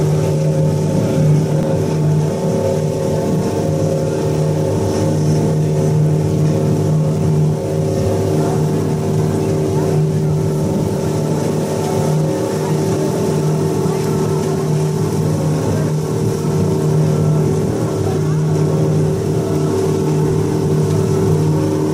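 At 1.63 s the sound freezes for a brief instant, about 1.3 ms, the waveform holding flat before resuming. This is an underrun with held sample: the output buffer ran empty, so the converter held its last value until fresh data arrived. The gap's length fits a 64-sample stall, and roughly a millisecond and a half of live audio was lost.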